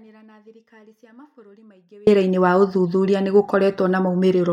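A speech clip that opens in the middle of an audio dropout to a faint residue: from the start until 2.07 s the wanted signal is absent, leaving only a faint leak of sound around 35 dB below normal level, before speech returns abruptly with "wa ũthuthuria nĩ". The likely cause is a break in the signal upstream while the path after it stayed live. On a waveform the first two seconds sit as a thin near-flat trace jumping to normal speech amplitude, and a spectrogram shows a dim wash snapping to bright speech energy.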